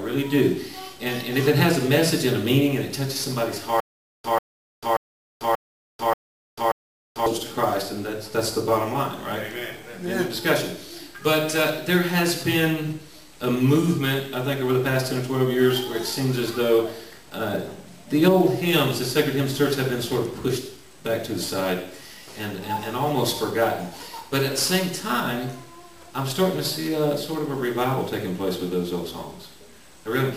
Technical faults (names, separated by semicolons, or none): stutter with silent gaps